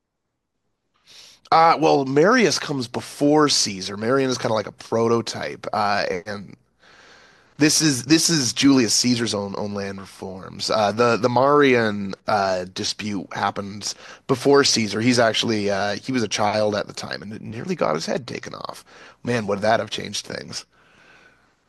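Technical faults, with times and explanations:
No technical faults can be heard in this speech clip. There is nothing here that needs a time or an explanation.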